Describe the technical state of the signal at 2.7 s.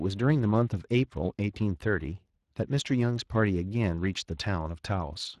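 Speex codec coding artefacts run through 2.7 s and the whole clip. Too few excitation bits leave this speech plainly hoarse and noisy, consistent with a bitrate near 22 kbps.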